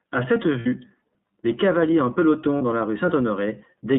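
The speech runs through the iLBC codec from start to finish. It is a narrowband coder that handles each frame on its own, and the rate heard fits its 13.33 kbps mode with 30 ms frames. The line is limited to roughly 150 Hz to 3.7 kHz, so everything above is gone. The damage is plainly audible: the speech sounds boxed-in, slightly rough and synthetic throughout.

At 0.60 to 0.67 s, lost iLBC frames leave a 60 ms gap, which fits two dropped frames. The decoder fills it by repeating the last pitch cycle with added noise, so the sound turns into a brief held, buzzy vowel. A shorter 30 ms loss at 2.58 to 2.61 s, consistent with one frame, gives a smaller blip of the same kind. Because each frame decodes independently, the speech recovers almost immediately after both.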